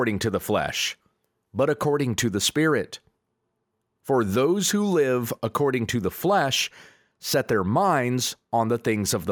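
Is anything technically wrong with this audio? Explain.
No, nothing technically wrong is audible in this recording.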